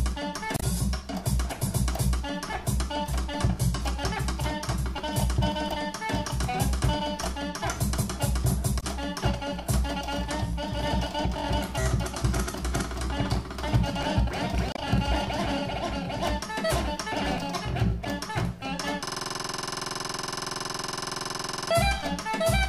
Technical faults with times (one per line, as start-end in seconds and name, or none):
0.56-0.63 damaged data in a compressed stream
8.77-8.83 damaged data in a compressed stream
14.72-14.79 damaged data in a compressed stream
19.06-21.71 system hang loop